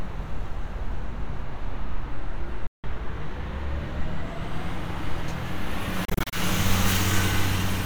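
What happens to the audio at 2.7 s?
At 2.67 s the sound cuts out and stays silent until about 2.85 s, a gap of roughly 0.18 s. When it returns, it has moved on, as though it kept playing through the hole. This is most likely a Bluetooth dropout: audio packets failed to reach the headphones in time and were discarded, so the output went quiet until valid packets arrived. The missing stretch of about 168 ms points to a run of consecutive lost frames.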